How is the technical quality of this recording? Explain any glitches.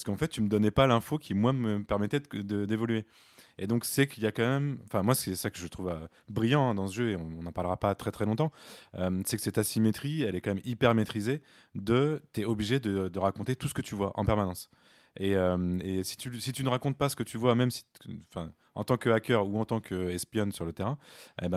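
Nothing in this speech recording sounds like a glitch, so there's nothing here that needs explaining.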